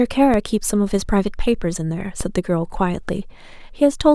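A speech recording carrying two DC steps, at 0.34 s and 2.21 s, each a sudden zero-line jump of about -12 dBFS that then decays through a 20 Hz high-pass, so it lands as a low thump or click, with the speech continuing uninterrupted.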